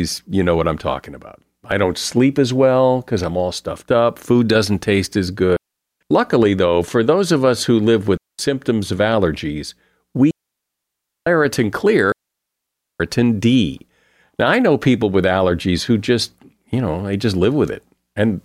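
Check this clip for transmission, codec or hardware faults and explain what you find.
The speech is interrupted four times by digital wireless dropouts: at 5.56 to 6.01 s right after "food doesn't taste as", at 8.17 to 8.39 s between "of us who live" and "of allergies", at 10.31 to 11.27 s just after "of allergies", and at 12.12 to 13.00 s. The gaps last 0.44, 0.22, 0.96 and 0.88 s. Each time, the radio link lost more data than the receiver could conceal, so it muted with a very short fade. The result is a clean hole of near silence with no crackle or noise burst at either edge.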